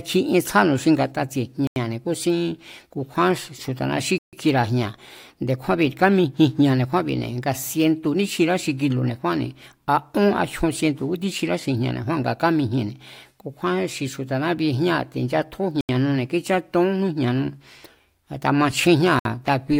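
The speech cuts to dead silence four times, at 1.67 to 1.76 s (90 ms), 4.18 to 4.33 s (146 ms), 15.81 to 15.89 s (82 ms) and 19.19 to 19.25 s (59 ms). Each gap shows as a flat waveform and a blank vertical band on a spectrogram. This is likely a Bluetooth stall, where the headphones' buffer ran dry while delayed packets were resent.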